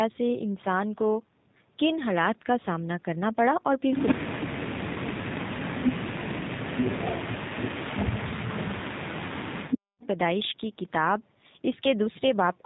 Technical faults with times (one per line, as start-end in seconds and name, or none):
0.00-12.66 G.729 codec
8.00-10.03 speech suppressed in double talk